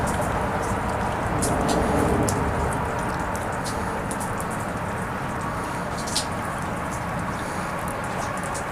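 Nothing in the audio stood out as a technical fault on listening.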